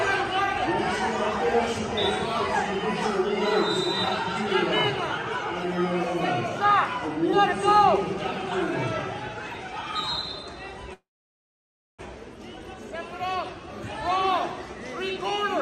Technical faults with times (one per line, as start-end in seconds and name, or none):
10.93-12.01 call audio freeze